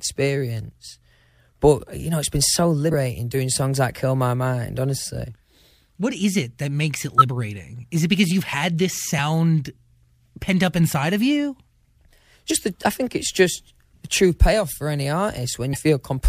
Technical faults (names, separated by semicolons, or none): compressed frames skipped